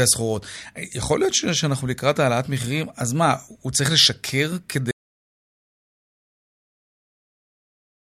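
At 4.91 s the speech drops out to dead digital silence through to the end, no room tone, likely the input disconnecting or muting while recording continued.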